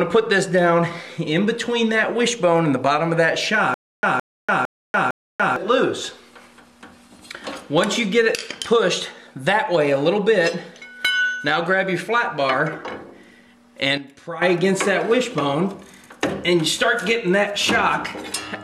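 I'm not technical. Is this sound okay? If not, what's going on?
No. From 3.74 to 5.56 seconds there is a stutter with silent gaps. A short sixth-of-a-second burst repeats four times with silence between, likely from playback stalling and retrying.

From 13.98 to 14.42 seconds there is a sudden gain jump. Everything, background included, abruptly turns much quieter, likely from a volume setting changing instantly without fading.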